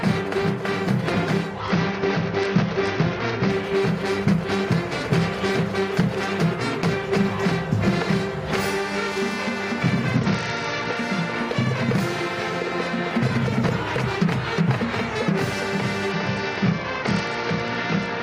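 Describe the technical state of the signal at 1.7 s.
At 1.7 s you're inside a Bluetooth SBC bit pool drop that runs from about 1.60 s to 3.50 s. The link got congested, so the sender cut the bits per frame to keep the audio flowing. The sound fits a bit pool falling from 28 to 9, roughly 78 kbps. The top sub-bands starve, so the treble goes dull, and the remaining bands are coarsely quantised, which adds a gritty noise until the rate climbs back.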